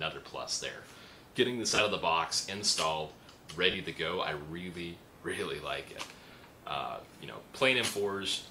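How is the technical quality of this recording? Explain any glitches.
The recording has three short dropouts from lost LE Audio frames, at 1.70–1.80 s, 3.71–3.74 s and 6.32 s. The first is the worst: about 60 ms of gaps scattered over 100 ms, the longest run around 30 ms. The second covers 30 ms, and the third is a single 10 ms blip. When frames go missing, the LC3 decoder fills in by reusing the last spectrum with random signs, so each gap sounds like a brief noisy smear. The light codec compression underneath adds little.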